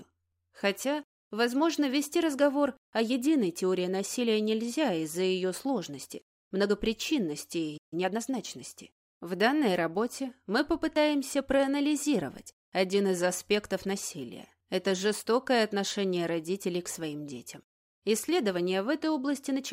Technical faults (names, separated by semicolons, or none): playback stall; time-compressed catch-up